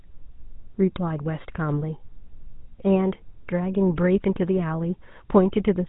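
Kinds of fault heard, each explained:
GSM full-rate codec: speech was coded by an early mobile-phone vocoder, likely at 13 kbps, leaving a buzzy, gravelly roughness and nothing above about 3.8 kHz.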